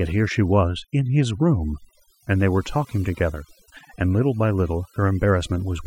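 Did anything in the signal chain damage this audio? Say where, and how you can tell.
Yes. Throughout the speech the background sinks to near silence dotted with twinkling specks, and the quieter parts of the voice are hollowed out. That is overdone noise removal at the processing stage: a noise reduction stage set far too aggressively pushes individual frequency bands down or off whenever they sit close to its noise estimate. The leftover isolated bands become the specks, and the softer voice energy gets removed along with the noise.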